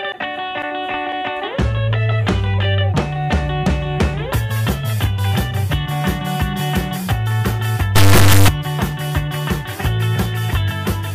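Integer read as float, from 7.96 to 8.48 s: 32-bit integer samples are read as 32-bit float values, so the sound becomes a harsh, extremely loud buzzing square wave.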